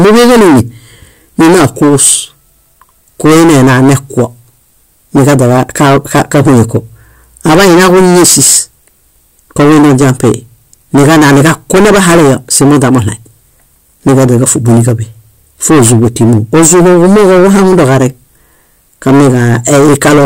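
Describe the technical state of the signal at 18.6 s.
At 18.6 s the speech carries a harsh, buzzing fuzz on every loud syllable, as it does throughout the clip. This is hard clipping: the signal is driven about 21 dB past the ceiling, so nearly a third of samples are sliced flat, spraying high harmonics.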